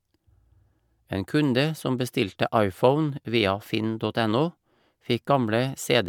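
A short recording of speech, with nothing technically wrong to point to anywhere in it. No dropouts, glitches or other defects turn up at any moment, so there are no times or causes to report.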